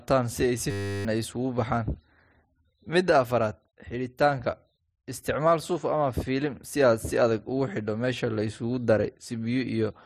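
A speech recording where, from 0.71 to 1.05 s, the audio turns into a flat, steady buzz at 100 Hz, with about a third of a second of sound lost. This is a system hang loop: the system froze while the hardware replayed one 10 ms buffer over and over.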